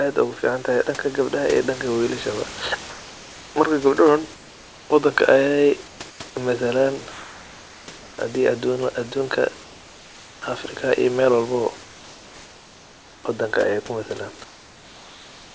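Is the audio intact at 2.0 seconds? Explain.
Yes, at 2.0 seconds the speech is intact, with no fault at that moment.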